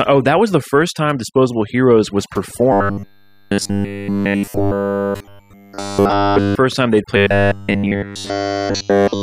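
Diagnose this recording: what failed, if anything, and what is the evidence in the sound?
Call processing: overdone noise removal throughout. Bands near the noise estimate are cut away, leaving a lowered background with twinkling specks.

Driver or buffer: robotic sound from repeated short buffers from 2.72 to 6.55 s and 7.17 to 9.23 s. A rigid 100 Hz buzz likely comes from every 10 ms block being replayed.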